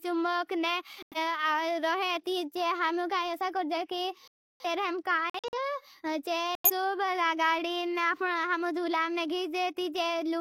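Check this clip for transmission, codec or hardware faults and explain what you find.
The speech has four sudden silent gaps from corrupt frames being muted: 1.03 to 1.18 s, 4.28 to 4.65 s, 5.30 to 5.58 s, and 6.55 to 6.71 s. The decoder rejected damaged compressed frames, and the player put silence in their place. Each hole cuts in abruptly. Their lengths, from about 0.15 to 0.37 s, point to two to seven frames lost at a time. Timing is kept, so the speech resumes on schedule.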